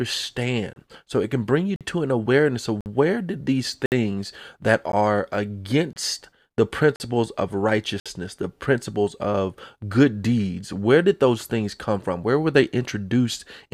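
Gap between stream segments at 0.73, 1.76, 2.81, 3.86, 4.92, 5.93, 6.96 and 8.00 s: roughly once per second, mismatched segment timestamps leave hard-edged silent holes of 12 to 60 ms, with no audio lost.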